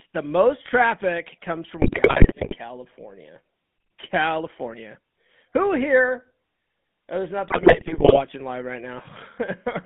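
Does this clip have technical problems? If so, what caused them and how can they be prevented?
Yes. The whole clip has passed through the GSM full-rate codec. This coder models the vocal tract and excites it with a sparse, regularly spaced pulse train, which fits a 13 kbps full-rate link, and the line is limited to roughly 150 Hz to 3.5 kHz. In the sound, that gives a plainly audible buzzy, gravelly roughness over the speech, with the upper frequencies missing and a thin, boxed-in quality. Using a wideband or modern codec such as AMR-WB or EVS, rather than the original full-rate coder, would prevent this.

GSM bit errors also occur twice: from 1.82 to 2.56 s, right after "the most traffic comes", and from 7.48 to 8.22 s, between "there's not" and "live right". Corrupted bits from a weak radio link reached the decoder, scrambling the filter, pitch and gain parameters frame after frame. The damage fits an error rate of roughly 4 to 5 percent. 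The speech breaks into squawks, pops and gargling, with the tone and level jumping erratically for about three quarters of a second each time. A stronger signal, better channel coding, and frame-erasure concealment that mutes bad frames instead of playing them would prevent it.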